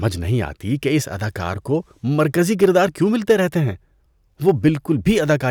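Brief crackly harshness on loud speech peaks at 2.63–2.78 s, just after "اس اداکار کو مرکزی", and at 4.48–4.68 s is hard clipping: peaks overdriven by about 3 and 2 dB are cut flat, adding high harmonics.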